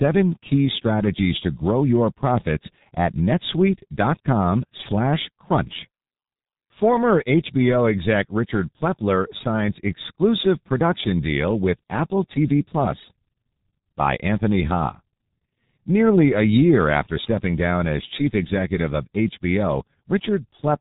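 Throughout the recording, the speech has passed through the G.723.1 codec, an early internet-telephony coder that rebuilds the voice from a sparse model refreshed only once per 30 ms frame. The damage here is heavy and fits a bitrate of about 6.3 kbit/s. Nothing above 3.8 kHz survives, so the speech sounds muffled and boxy, and the slow model updates leave it hoarse, with consonants smeared together.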